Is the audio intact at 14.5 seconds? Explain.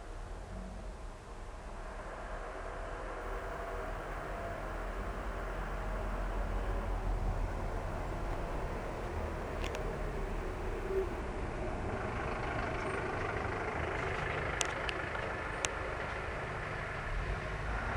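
Yes, the audio at 14.5 seconds is intact, with no fault audible at that moment.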